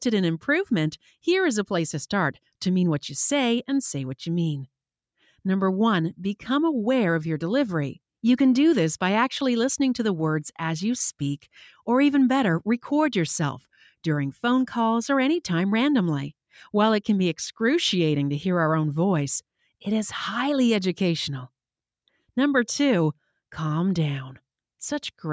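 Nothing here stands out as a fault; it's simply been through a call's microphone processing, so the deepest bass is trimmed away and nothing sits above about 8 kHz, which is just how that path normally sounds.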